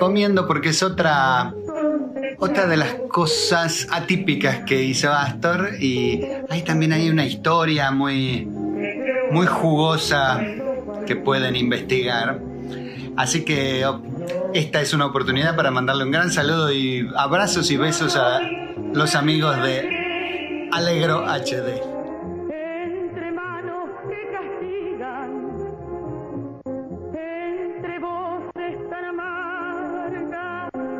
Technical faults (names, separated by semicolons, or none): none